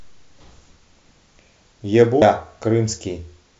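At 2.21 s there's a quick blip cutting through the speech, a classic case of damaged data in a compressed stream. A bit of the encoded file got corrupted, so the decoder stumbled over those frames, lost sync and had to hunt for the next valid header, leaving that brief glitch.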